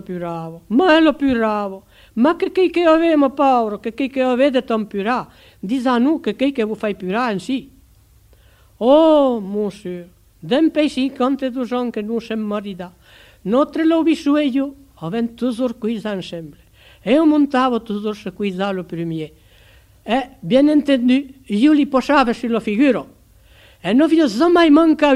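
No technical fault can be heard anywhere in this audio. Nothing in it calls for a repair or a search for a cause.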